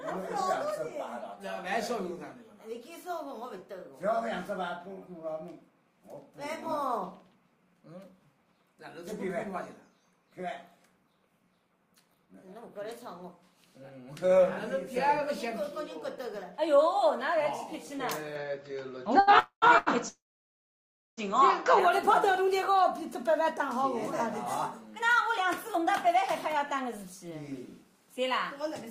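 Input switched to a poorer device, 18.35 to 21.8 s: the sound abruptly turns duller and boxier, with nothing above 7.6 kHz, a level shift of about 5 dB and a new background noise floor roughly 45 dB below the signal. There is no silence at the change. This is likely a switch to a narrower-band microphone or headset partway through the recording, and the fuller tone returns at 21.8 s.

Short stall from a late packet, 19.19 to 19.29 s and 19.78 to 19.88 s: each time a packet arrived late and the jitter buffer ran dry, so the receiver held the last sound for 78 ms and then 86 ms. Playback then resumed from the same point, so nothing is lost, but everything after each stall arrives later.

Call audio freeze, 19.39 to 19.64 s and 20.08 to 21.19 s: the first freeze fills 226 ms, including 90 ms of silence. The second fills about 1.09 s, with 980 ms of it silent. In both, the last sound is stretched into a fading buzz or hiss before dropping out. 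The likely cause is packets held up in transit, which emptied the buffer. When they arrive the audio picks up where it stopped, so a gap has been inserted without anything being cut.

Jitter buffer speed-up, 22.28 to 23.97 s and 24.88 to 28.84 s: after the freezes the buffer held too much audio, so the receiver trimmed short pitch-period slices to catch up. Playback runs at 103% and then 104% at unchanged pitch, cutting roughly 50 ms and then about 150 ms.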